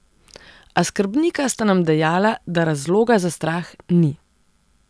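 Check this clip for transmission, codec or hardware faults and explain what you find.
Nothing turned up here; the speech comes through steady and unbroken, with no sign of trouble from the transmission path or the hardware.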